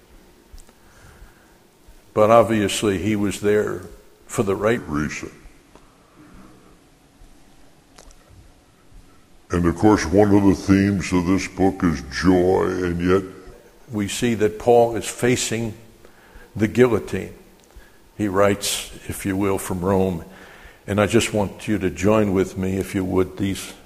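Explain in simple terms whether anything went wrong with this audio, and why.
From 4.77 to 13.53 s everything drags, slow and deep: a section at the wrong speed, at 0.8 times normal, likely from a mismatched clock.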